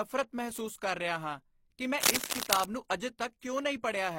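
From the start, the speech carries the layered smearing of transcoding between lossy codecs. Two sets of artefacts are heard together. That mix most likely comes from a low-rate Opus encode, around 24 kbit/s, re-encoded to HE-AAC around 32 kbit/s. On a spectrogram the top band looks patchy and blocky, with nothing above 21.3 kHz, and that ceiling holds for the whole clip.

From 2.00 to 2.64 s, cable scratch noise rides over the speech. It is a dense, uneven crackle and rustle, somewhat louder than the speech itself, and most likely comes from a worn cable or connector being moved so that its contact resistance jumps about rapidly. On the waveform it shows as a ragged, spiky thickening across that stretch. On the spectrogram it appears as a broadband smear of irregular vertical streaks that cover the speech harmonics.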